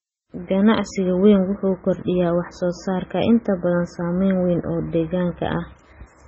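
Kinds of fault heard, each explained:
MP3 compression: throughout, nothing above 8 kHz and a heavy watery swirl as weak frequency lines flicker, likely from a bit-starved MP3 encode consistent with 16 kbps.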